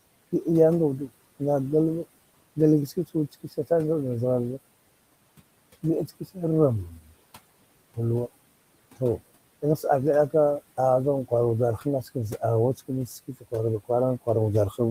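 Noise suppressor artifacts run through the whole clip. The suppressor estimates the steady room noise, which sits about 19 dB below the speech, and pulls those bands down by about 20 dB in each frame wherever it judges noise dominates. The background drops away in pauses and surges back under speech. On a spectrogram the noise floor shows as a darker, blotchy field that switches on and off with the speech; on a waveform the pauses look almost flat.

Speech cut by the noise suppressor occurs at 3.32–3.71 s, 6.08–6.37 s, 6.91–7.06 s, 13.27–13.53 s and 14.7–14.8 s. In each case the suppressor mistook quiet speech energy for noise and turned it down with the background. The deepest drops are about 13, 12, 10, 17 and 9 dB, each affecting roughly a tenth of a second or a little more. Soft consonants and word tails sound swallowed. On a spectrogram the upper consonant energy fades or disappears, and the waveform envelope dips sharply.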